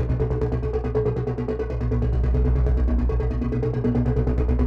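No technical faults are audible anywhere in the recording.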